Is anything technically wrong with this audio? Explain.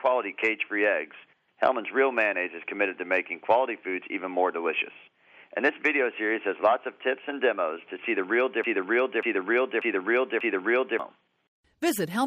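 Yes. From 8.64 to 11.0 s, a broken-record loop replays one 0.59 s fragment four times, likely from a stalled stream. The waveform shows identical repeating blocks.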